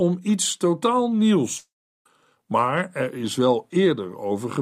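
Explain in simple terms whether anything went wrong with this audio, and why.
At 1.57 seconds the speech suddenly smears into a short buzzy hiss that fades within about a tenth of a second, then falls silent until 2.06 seconds, when speech resumes with roughly half a second of it simply gone. This is most likely a long network dropout: the sound stopped arriving, so the receiving end briefly stretched the last bit of sound to cover the gap, gave up, and played silence until the connection recovered.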